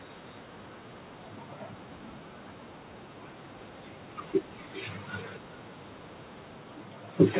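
From start to finish the speech carries an echo with no canceller. The far end's loudspeaker leaks into its microphone and nothing removes it. A thinner copy returns roughly 400 ms later, about 16 dB below the talker, over narrowband audio cut off at 4 kHz.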